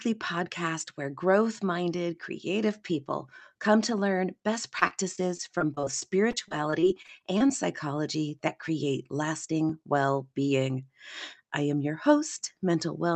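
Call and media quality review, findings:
Repeated packet loss (robotic sound), 4.79–7.51 s, right after "come to learn best". Choppy speech: many short dropouts, longest about 24 ms, each patched by stretching the preceding audio, about 12% of the stretch concealed. Probable component: network/jitter buffer ahead of the call codec.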